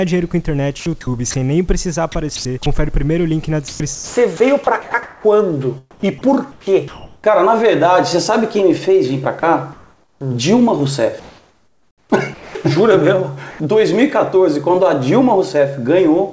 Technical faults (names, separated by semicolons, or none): sound chopped by the voice detector; sound dropped by the voice detector; comfort noise in place of the background